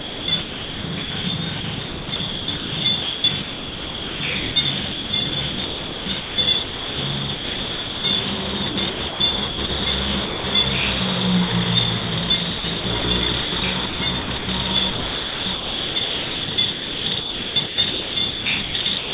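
From 0.0 to 8.04 s, 8.7 to 10.44 s and 12.58 to 19.13 s the sound turns choppy, likely chopped by the voice detector, with comfort noise filling the gaps. These show as flat, featureless noise patches on the spectrogram, all below 4 kHz.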